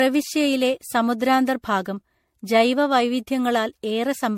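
Generation loss runs through the whole speech clip: the sound is swirly, smeared and hollow, with blurred attacks and nothing above 16.5 kHz. It is likely the result of repeated MP3 re-encoding, around seven passes at what sounds like 64 kbit/s, each re-quantising on a shifted frame grid.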